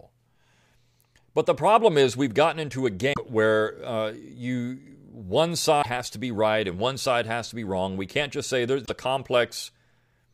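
Three short bursts of damaged data in the compressed stream break up this speech clip. The first runs from 3.10 to 3.18 s, right after "we've gotten into a" and before "where uh". The next is at 5.79 to 5.86 s, just ahead of "has to be right". The last is at 8.82 to 8.90 s, following "can't just say". Each time, corrupted bytes throw the decoder off its frames, and it has to hunt for the next valid header, so you get a quick glitch.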